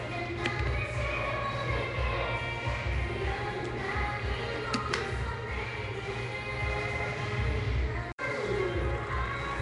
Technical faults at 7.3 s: Nellymoser compression

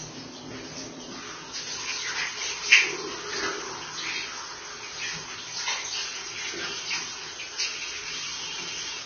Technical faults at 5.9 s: Vorbis compression

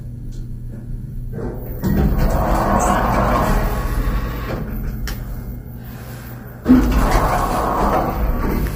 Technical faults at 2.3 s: low-delay AAC compression

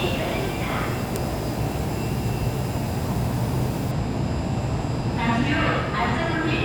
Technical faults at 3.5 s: low bit depth with dither

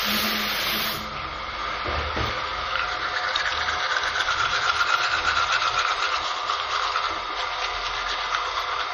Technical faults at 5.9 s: MP3 compression

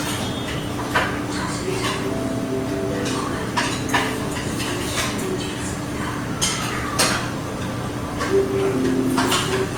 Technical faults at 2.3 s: generation loss

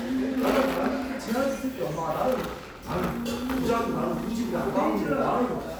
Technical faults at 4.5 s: none

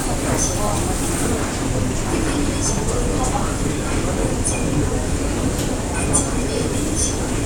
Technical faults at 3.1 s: none

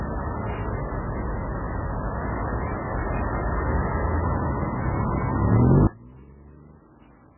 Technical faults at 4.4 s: MP3 compression

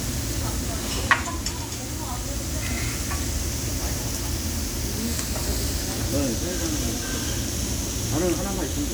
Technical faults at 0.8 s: generation loss

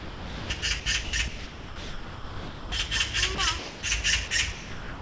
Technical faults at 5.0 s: sound chopped by the voice detector

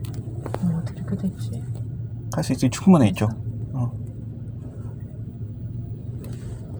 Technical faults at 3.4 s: none

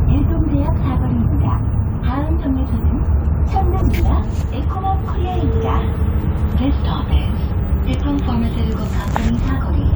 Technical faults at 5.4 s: none

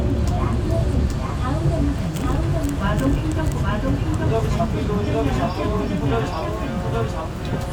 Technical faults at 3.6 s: doubled audio track

